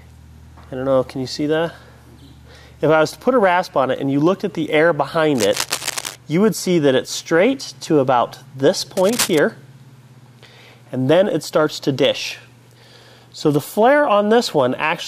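A dense, uneven scratching rustle sits over the sound from 5.35 to 6.16 s and, louder, from 8.97 to 9.39 s: cable scratch noise, likely from a worn connector being moved.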